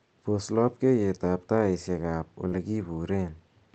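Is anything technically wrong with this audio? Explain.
Yes. There is a short concealed packet loss from 2.48 to 2.53 s. About 40 ms of the call audio failed to reach the decoder in time. The receiver filled the gap by extending the preceding sound, using its pitch where it was voiced and shaped noise where it wasn't, before blending back into the real signal. It comes across as a brief smear or wobble in the speech. The call path's top end stops near 8 kHz.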